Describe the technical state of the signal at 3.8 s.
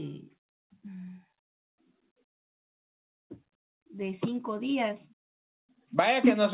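At 3.8 s the audio is intact, with no dropout, glitch or distortion, only the narrowband character of the G.711 call path, which leaves nothing above 4 kHz.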